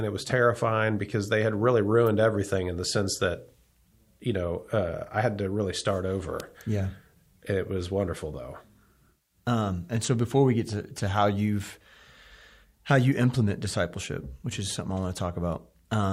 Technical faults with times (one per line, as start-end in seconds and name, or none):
2.07 electrical switching spike
6.40 electrical switching spike